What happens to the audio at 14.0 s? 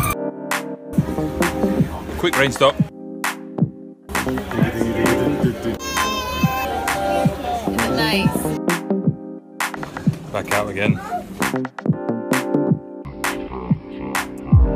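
Nothing goes wrong at 14.0 s; the audio is intact at that point.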